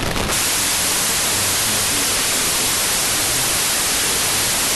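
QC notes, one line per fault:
Throughout, wrong sample width: 32-bit integer samples read as 16-bit pairs, so low halves become loud noise burying speech at half speed, an octave down.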